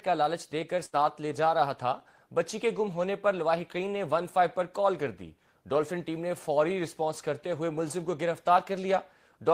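At 0.85 s, a burst of packet loss hits: consecutive packets never arrived in time, so the receiver stretched the last sound and faded it out for about 78 ms, to 0.95 s. Playback then resumes roughly 80 ms further on, and that stretch of audio is missing.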